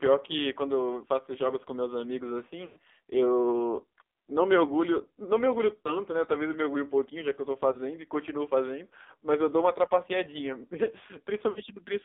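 Throughout, the speech carries heavy AMR narrowband mobile codec damage. The band runs only from about 300 Hz to 3.7 kHz. The buzzy, synthetic tone fits a low rate near 6 kbps, where few pulses model each frame.

Lost AMR speech frames follow. At 2.66 to 2.79 s, the decoder stretches the last sound, which fades for about 100 ms. Brief dips occur at 5.84 to 6.00 s and 7.72 to 7.77 s. At 11.50 to 11.60 s, about 60 ms blurs and fades.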